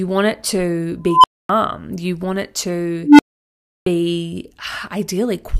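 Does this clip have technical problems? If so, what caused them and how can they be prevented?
Yes. At 1.07 to 1.49 s and 3.03 to 3.28 s an unstable filter, a recursive filter running on bad coefficients, let its output grow without limit. This produces squealing tones of around 1 kHz and around 300 Hz that swell over 166 ms and 158 ms, clip, then drop to silence for 255 ms and 93 ms while the filter resets. Check coefficients for stability before loading them, and clamp or reset the filter state when the output diverges.

At 3.81 s, after a 0.62 s pause, the output device needed time to wake or relock, so the clipped start after a pause swallowed the first 54 ms of speech, which begins abruptly. Keep the output stream active through pauses instead of letting the device sleep.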